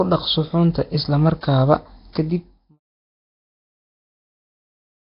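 Speech running the whole way through with heavy Nellymoser compression damage: a rough, hissy halo and a smeared, underwater quality, with nothing above 5.3 kHz. That's likely Nellymoser Asao, the old Flash mic codec, starving weak bands at a low bitrate near 22 kbps. The smooth fade-out starting around 2 s, silent by 2.8 s, carries that same grit down with it.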